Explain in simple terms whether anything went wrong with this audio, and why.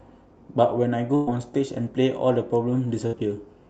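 Two bursts of packet loss interrupt this speech call audio, at 1.15 to 1.30 s and 3.07 to 3.16 s. The receiver filled each gap by stretching and fading the last sound, about 115 ms and then 60 ms, and about 120 ms and 60 ms of speech were lost.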